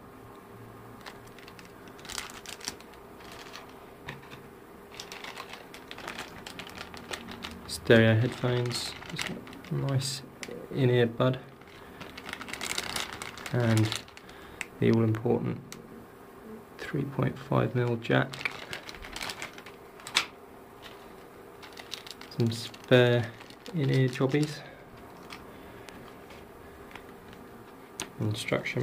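Sharp loud pops cut through the audio three times: a single pop at 6.08 to 6.10 s, a quick double pop between 14.94 and 15.17 s, and a softer single one at 25.89 to 25.91 s. The first two jump roughly 15 dB above the surrounding sound, the last about 10 dB. The audio carries on underneath each pop, which points to brief voltage pulses, likely from a plug, switch, static or driver glitch.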